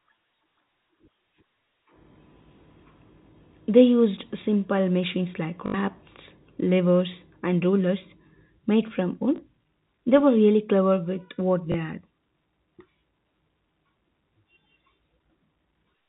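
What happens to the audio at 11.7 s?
At 11.72 s there is packet loss with the last packet repeated. About 20 ms of audio goes missing, which fits one lost 20 ms packet. The receiver fills the gap by replaying the previous packet. The single repeat gives a small blip.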